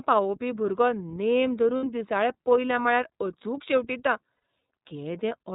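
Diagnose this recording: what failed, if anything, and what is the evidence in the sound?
The speech sounds band-limited and slightly rough, with a synthetic edge and nothing audible above 4 kHz. This is the iLBC codec, a narrowband VoIP codec, damaging the audio at the codec stage throughout. iLBC codes each frame's excitation independently and discards everything above 4 kHz, producing the thin, grainy texture heard here. The degradation is plainly audible, and the character fits the 13.33 kbps mode with 30 ms frames.

At 1.77 to 1.86 s and at 4.34 to 4.43 s, the speech turns into a brief held, breathy buzz, then snaps back to normal immediately. These are lost iLBC frames, a network-stage failure in which packets never arrived. The decoder filled each gap by repeating the last pitch cycle blended with noise. The gaps last 60 ms and 90 ms, which fits two and three lost 30 ms frames. Recovery is quick because iLBC frames do not depend on earlier ones.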